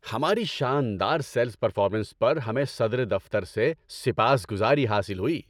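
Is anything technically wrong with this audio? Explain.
Yes. From 0.46 s to 5.10 s the speech has wrongly applied de-emphasis: a treble-cutting stage meant to reverse pre-emphasis was used where none existed, or a second time. The response tilts gradually downward, about 10 dB lower at 10 kHz than at 1 kHz, so consonants lose their crispness and the sound turns dull and muffled. Unlike a low-pass filter, there is no abrupt cutoff, only a smooth, progressive slope through the upper range.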